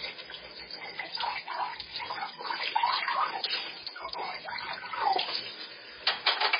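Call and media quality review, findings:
Throughout: watery, swirly texture, smeared attacks, hard treble ceiling at 5 kHz; likely MP3 compression at a very low bitrate. Spectrogram: flat top edge, flickering holes in weak bands frame to frame.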